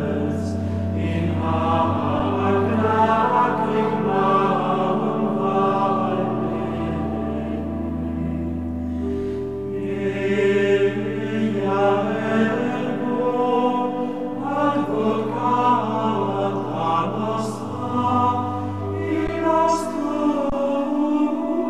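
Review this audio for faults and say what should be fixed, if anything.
Three underruns with held sample, at 2.19 s, 19.27 s and 20.50 to 20.52 s: the output freezes flat for about 6, 12 and 23 ms (which fits 256-, 512- and 1024-sample buffers), then resumes softly. A larger output buffer or higher-priority audio thread should prevent it.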